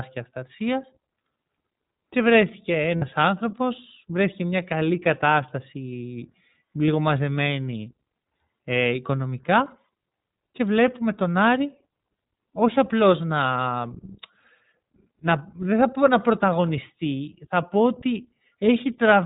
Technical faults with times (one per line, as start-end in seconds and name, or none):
0.00-19.25 iLBC codec
2.96-3.04 lost iLBC frames
6.86-6.88 lost iLBC frames